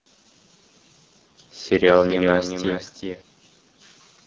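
Speech, run through the AMR wideband (HD Voice) codec for the whole clip, and squeezed hard. The rough, raspy grain points to the lowest AMR-WB mode, around 6.6 kbit/s. At that rate the vocal tract model can't place enough pulses, so the voicing turns rough and raspy. Nothing reaches above about 7.1 kHz, and the top band sounds hissy because it's filled with shaped noise, not real detail.

From 1.77 s to 3.21 s there's also a doubled audio track. A second full-band copy trails the original by roughly 0.4 s at a few dB lower level. It's a clean repeat with no room decay, and it cuts in and out abruptly at both ends. That points to the same audio being mixed in twice, likely from a slower second capture path or an edit holding two offset copies.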